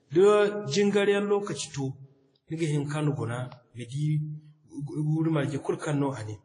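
From start to finish the speech carries layered coding artefacts and nothing above 10.1 kHz, most likely from transcoding between lossy codecs. A low-rate WMA-style encode followed by a Vorbis pass fits it: each stage adds its own artefacts on top of the last, and the lowest band-limit in the chain remains.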